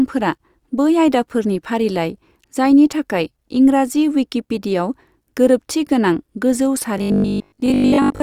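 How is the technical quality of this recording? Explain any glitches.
The recording has one glitch near the end. From 6.98 s to 8.22 s, just after "गोरोबथि गोनां गोजौ", there is robotic sound from repeated short buffers. Audio likely arrived too seldom, so roughly a 20 ms chunk kept repeating in place of most of the real signal. This imposes a steady 50 Hz buzz, turning the speech into a rigid, metallic drone that only loosely tracks the words.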